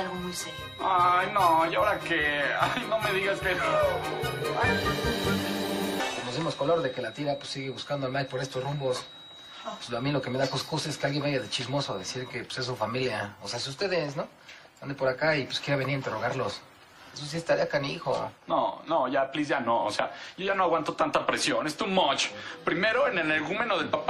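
A loudspeaker-to-microphone loop was likely sitting just at the edge of feedback, ringing at one frequency without building into a howl. The result is a feedback whistle from the start of the clip to about 12.4 s: a thin, steady tone near 3.8 kHz held well beneath the main sound, roughly 20 dB down, swelling and fading slowly in level as the loop gain drifts, then disappearing after 12.4 s.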